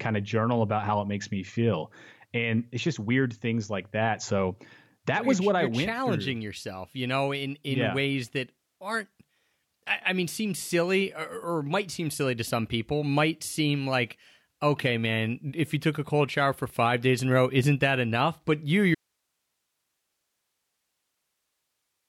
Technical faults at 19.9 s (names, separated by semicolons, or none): audio dropout to a faint residue